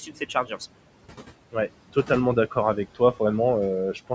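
Speech runs through noise suppressor artifacts from start to finish. The room noise, which sits about 15 dB below the speech, is pulled down by about 18 dB between phrases and swells back up beneath them, leaving a residue that comes and goes frame by frame. The audio stops at 8 kHz, as the call's microphone processing band-limits it. A slowly rising and falling gate would change the level of the whole signal, but here the noise floor pumps in step with the speech. That points to spectral noise reduction. Near the opening, between 0.06 and 0.61 s, the noise suppressor also cut the speech itself. For roughly 150 ms in total, scattered across that stretch, soft speech sounds drop by as much as about 10 dB and come out swallowed and faint. A dropout or mute would go fully silent and would not follow the quiet portions, so this is different. Only the weakest, most noise-like parts of the speech were turned down along with the background, while the louder parts passed through.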